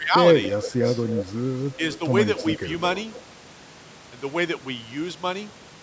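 It's a speech recording from a call, and right at the start there's speech suppressed in double talk: from 0.0 to 0.15 s the talker dips by something like 15 dB, and again from 0.52 to 0.74 s by roughly 10 dB. That's likely the echo canceller ducking everything while both sides overlapped. Later there's echo leak, a delayed copy of the voice trailing about 283 ms behind at 1.08 to 1.31 s (fairly loud, only about 5 dB down), 1.92 to 1.97 s (faint, about 20 dB down) and 2.37 to 2.58 s (about 10 dB down). That's likely the far end's loudspeaker bleeding past its canceller.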